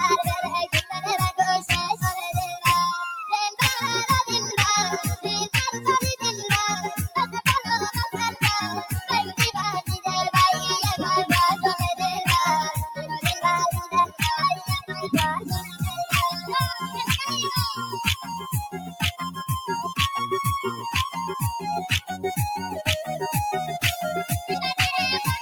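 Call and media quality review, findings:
Noise suppressor applied to music or sounds, whole clip. Level pumps and thins by around 5 dB as held material and tails are treated as noise. Unlike compressor pumping, attacks mostly pass and dips follow steadiness, not loudness. Speech-tuned suppressor left active.

Sound cut by the noise suppressor: 0.66–1.08 s (about 14 dB), 2.48–2.65 s (about 13 dB), 13.83–14.21 s (about 13 dB), 14.56–14.94 s (about 14 dB), 15.63–15.79 s (about 9 dB), 16.74–16.89 s (about 5 dB), 18.16–18.50 s (about 8 dB), 18.74–19.21 s (about 13 dB). Sustained or decaying parts sink and tails are cut short while onsets survive. This sets it apart from dropouts, which silence everything.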